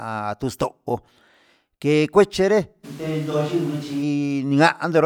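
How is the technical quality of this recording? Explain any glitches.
There's one clear glitch. From 2.86 to 4.01 s it's a switch to a distant microphone: the speech abruptly turns roomy and hollow, thins out in the bass, drops about 5 dB, and room noise rises to roughly 25 dB below it. The close mic's feed likely dropped out, so a farther mic carried that stretch until it snapped back.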